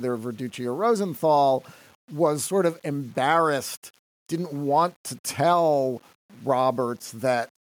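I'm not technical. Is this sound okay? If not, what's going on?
No, the speech carries a grainy, gritty edge from start to finish, worst on the quietest parts, where it sputters or drops out. This is likely low bit depth without dither: the recording was rounded to about 8 bits, too coarse for smooth detail.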